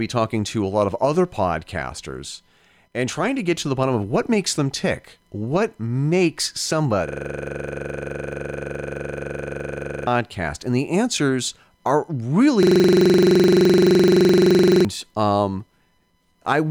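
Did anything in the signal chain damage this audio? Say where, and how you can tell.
Yes, a system hang loop in the driver/buffer stage, at 7.08 to 10.07 s and at 12.63 to 14.85 s, right after "the answers are". An identical 42.67 ms slice repeats at 23.4 Hz as a buzzy stutter. That fits a 2048-sample ring buffer cycling while the host froze, losing about three and two seconds.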